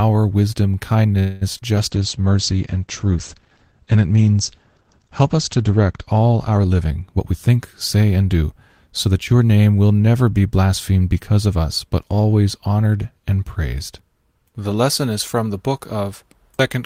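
At 1.19 s the speech stops advancing and the last sound is stretched into a fading buzz for about 0.22 s, until 1.43 s, when it picks up exactly where it left off. This is most likely a call audio freeze: packets were held up in transit, the jitter buffer ran dry, and the receiver extended the final sound until delivery resumed. Nothing is lost, but the whole clip now runs about 0.22 s late. On a spectrogram the last harmonic pattern smears horizontally and dims, and the waveform decays without a true gap.

Right after that come two short concealed packet losses, at 1.57–1.60 s and 1.60–1.63 s, each covering about 20 ms that never reached the decoder. The receiver continued the preceding sound and then blended back into real audio, so this stretch has a quick smear and a brief wobble. In the spectrogram these are two narrow, blurred slivers where fine detail goes soft. In the waveform the cycles look too regular for a moment.

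From 1.77 s to 7.51 s there is a call bitrate drop. The bandwidth estimate fell, and the encoder went from 32 to 11 kbps, staying at the lowest rate for about 3.7 s. Audio bandwidth shrinks from 20 kHz to 8 kHz, so the speech turns muffled and watery, with coarser texture. A spectrogram shows a flat ceiling at 8 kHz with empty space above it, lifting again once the rate recovers.

Inside that stretch, 1.98–2.23 s has a jitter buffer slow-down. The receiver repeated single pitch periods to rebuild its reserve, adding 38 ms and playing at 88% speed without any change of pitch. The speech drags. The spectrogram shows the harmonics held flat for slightly longer than natural, and the waveform shows near-identical cycles repeated back to back.

Two jitter buffer speed-ups follow, as the receiver trimmed short pitch-period pieces to reduce excess delay. From 7.16 to 7.55 s playback runs at 129%, with roughly a tenth of a second removed, and it sounds clearly hurried. 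From 7.95 to 9.41 s, ending just before "name will never be", it runs at 107%, again losing roughly a tenth of a second, which makes it a subtler rush. Syllables appear compressed in time on the spectrogram while the harmonic spacing stays the same.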